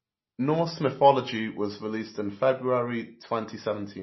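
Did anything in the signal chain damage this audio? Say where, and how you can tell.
Yes. Throughout the speech there is a watery, swirling quality, s sounds chirp, and nothing sits above 5.8 kHz. That points to the codec stage, likely MP3 compression starved of bits, which fits a low bitrate near 24 kbps: the encoder cuts the treble and lets weak frequency lines flicker frame to frame.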